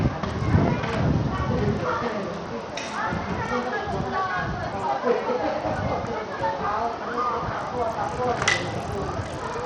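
From start to finish the treble thins out and flickers, coming and going instead of holding steady, while a gritty, grainy noise and a metallic aliasing cling to the sounds in the clip. The damage is plainly audible throughout. This is likely Bluetooth SBC compression with a starved bit pool, consistent with a low rate near 80 kbps. The weak upper sub-bands get few or no bits, and the remaining bands are coarsely quantised.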